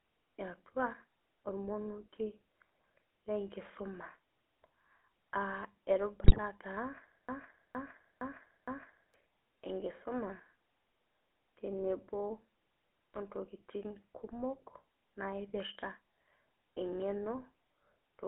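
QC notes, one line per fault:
Throughout: GSM full-rate codec, buzzy gravelly speech band-limited to roughly 300 Hz–3.4 kHz, which fits 13 kbps coding; spectrogram shows nothing above 3.4 kHz, smeared pulse-like harmonics.
6.24–6.39 s: GSM bit errors, corrupted decoder parameters produce squawks and gargling across several frames; spectrogram shows distorted spectral blocks, waveform shows abrupt level jumps.
7.29–9.14 s: broken-record loop, a 0.46 s fragment repeats four times back to back, likely from a stalled stream; waveform shows identical repeating segments, intended audio lost.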